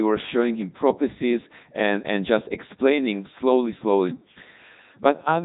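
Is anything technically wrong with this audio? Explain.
Yes. Throughout, the speech has passed through the Codec 2 vocoder, with nothing above about 3.8 kHz, which fits its 3.2 kbit/s mode. Only pitch, voicing, energy and spectral shape survive, and sine-wave resynthesis replaces the waveform, so the speech sounds heavily robotic and buzzy.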